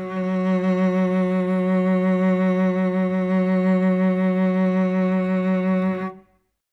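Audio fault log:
No fault is logged for this music.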